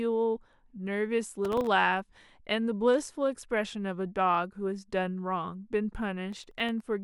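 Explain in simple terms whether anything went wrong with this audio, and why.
Processor overload crackle at 1.45–1.67 s and 6.33–6.88 s: the processor missed many sub-millisecond buffer deadlines, leaving tiny silent gaps heard as gritty crackling.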